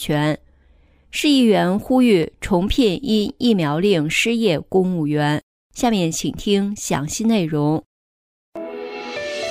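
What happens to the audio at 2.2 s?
At 2.23 s there is a single sharp click, a brief tick that leaves the surrounding sound untouched and shows as a thin vertical line across the whole spectrum. This is most likely dropped samples: well under a millisecond of the stream has gone missing, so the waveform leaps straight from one value to a later one. The gap is far too short to remove anything audible; only the abrupt step itself is heard.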